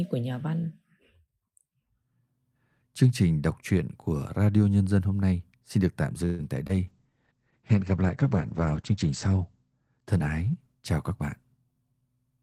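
At 6.25 s the speech stops moving forward. For about 0.16 s the last sound carries on and fades, and it never drops to silence. This is a call audio freeze. Packets were likely held up in transit, so the jitter buffer ran dry. The receiver stretched the last sound to bridge the wait. When the speech resumes at 6.41 s, it picks up where it stopped. Nothing is lost, but the call now runs about 138 ms later.

From 6.67 to 6.71 s there is a brief smear. This is short concealed packet loss. About 20 ms of audio never reached the decoder in time. The receiver filled the hole by extending the preceding sound, pitched if voiced and noise-like if not. It then blended back into the real signal. The patch is tiny, so it registers as a quick wobble rather than a gap.

At 6.88 s the sound turns rough and muffled. This is a call bitrate drop, and it lasts to the end of the clip. The bandwidth estimate fell, and the encoder was pushed to code with far fewer bits. 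The coarseness fits a fall from about 40 to 10 kbps. The top of the spectrum closes from 20 kHz down to 8 kHz, which removes the crispness of sibilants. The worst stretch lasts about 1.9 s.

From 11.57 to 12.38 s the speech sounds hurried. This is a jitter buffer speed-up. The buffer held more audio than its target, so the receiver trimmed it down. It cut out many short slices, each one or a few pitch periods long. Together they remove about a tenth of a second. Playback runs at 112% speed, yet the pitch stays the same. The result is rushed delivery without any chipmunk effect.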